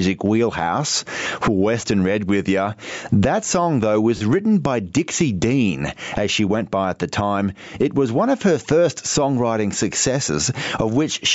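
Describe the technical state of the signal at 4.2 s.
At 4.2 s a short run of Bluetooth LE Audio frames was lost between 4.17 and 4.21 s, just after "song though" and before "written by". For those 40 ms, which fits about four consecutive 10 ms frames, the LC3 decoder filled the gap by repeating the last good spectrum with randomised signs and fading it. Any tonal content turns into a brief noisy smear instead of a clean continuation.

The same moment also carries gain pumping. The input gain is likely set far too high, so a fast limiter or compressor keeps pulling the level down on every loud sound, with a swing of about 20 dB. Loud and soft parts sit squashed close together in level.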